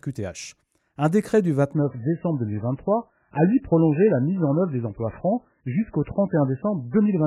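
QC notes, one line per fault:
1.73–7.27 s, adaptive stream at a lower bitrate: from 1.73 s to the end, the speech suddenly turns dull and full of codec artefacts, with nothing above 2.9 kHz and no gap at the switch. The stream fell back to a lower-bitrate MP3 version, which fits a drop from about 128 to 8 kbit/s.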